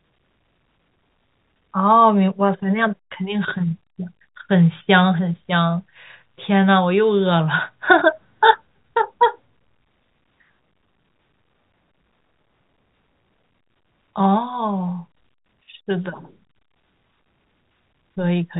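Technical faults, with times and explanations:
No technical faults are audible anywhere in this speech.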